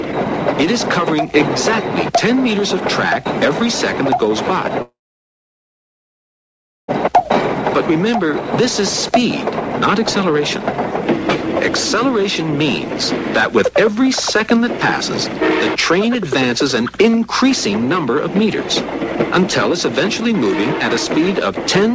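From 4.82 s to 6.91 s the audio cuts out for about two seconds, most likely a long network dropout. The last sound smears into a brief fading buzz or hiss, then there's nearly two seconds of silence, and the audio resumes further along with that stretch just gone. The G.722 call path shows as nothing above 8 kHz.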